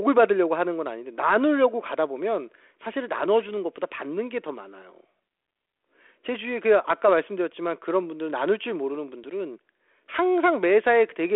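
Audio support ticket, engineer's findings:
Nothing stood out on listening through the speech carried over the 32 kbit/s G.726 telephone path.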